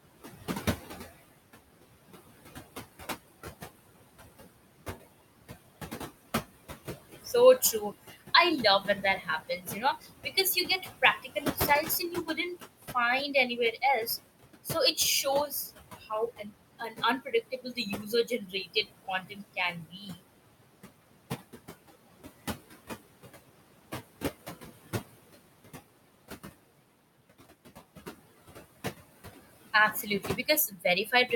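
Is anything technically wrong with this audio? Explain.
Yes. The background noise from the room, sitting only about 10 dB below the speech, is being processed aggressively, and that processing leaves two kinds of fault.

Noise suppressor artifacts run through the whole clip. The suppressor estimates the steady noise and pulls those bands down by about 19 dB each frame, so the noise floor pumps: it drops away in pauses and returns under speech. Untreated room noise would stay level instead.

Speech cut by the noise suppressor occurs at 7.61–8.22 s, 8.63–12.96 s, 13.34–14.1 s, 14.64–20.2 s and from 29.73 s to the end. Quiet speech is mistaken for noise and turned down by about 13 to 20 dB, the deepest at 20 dB in the 14.64–20.2 s stretch. Only scattered moments within each span are hit, roughly 1.5 s and 2 s in the two longer spans and about 0.15 s in each of the two short ones before them, so endings and soft consonants sound swallowed. 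Unlike a dropout, the sound fades rather than vanishing abruptly.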